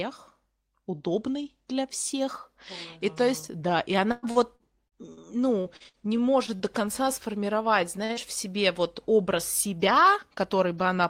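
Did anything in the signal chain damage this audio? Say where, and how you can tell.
Yes. The network dropped packets repeatedly from 4.11 to 6.63 s, just after "да и": eleven gaps, the longest 113 ms, patched by extending prior sound, giving choppy, robotic speech.

The jitter buffer slowed playback to 94% from 5.96 to 6.79 s, repeating pitch periods to add 56 ms, so speech drags at unchanged pitch.

A late packet emptied the jitter buffer at 8.05 to 8.12 s, causing a short stall: the preceding sound is held 45 ms too long, with nothing lost.

Short concealed packet loss follows at 8.13 to 8.20 s, right before "в себе вот образ": 40 ms missing, filled by continuation, heard as a brief smear.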